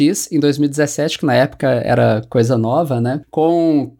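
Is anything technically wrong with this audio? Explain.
Yes. Sample clock jitter runs through the whole clip. The converter's clock wanders, so each sample is taken a little early or late. The timing error is roughly a couple of microseconds, and it turns into an amplitude error in proportion to how steeply the waveform is changing. The result is a faint hiss and roughness, roughly 40 dB below the speech. It rises on loud and bright, sibilant sounds and disappears in the pauses.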